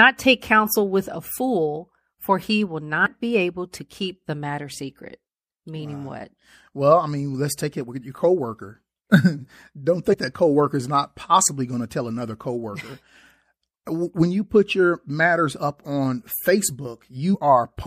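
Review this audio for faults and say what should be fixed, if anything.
The whole recording carries plainly audible MP3 compression damage. The likely cause is MP3 encoding at a low bitrate, around 64 kbps. At that rate the encoder runs short of bits. It cuts the treble above a fixed frequency and drops weak frequency components. Those components flicker in and out from frame to frame, so the speech sounds dull, watery and swirly. To prevent it, encode at a higher bitrate or keep an uncompressed master.

Compressed frames skipped occurs three times: at 3.05 s, between "fool for he will" and "be able to keep"; at 10.13 s, just before "that coworker is not"; and at 17.34 s. Each time the audio jumps ahead by about two frames of roughly 26 ms each, losing around 50 ms of speech. Neighbouring frames overlap, so each join is a brief smeared blip, not a hard click. To prevent it, check file integrity and repair or re-fetch damaged frames before decoding.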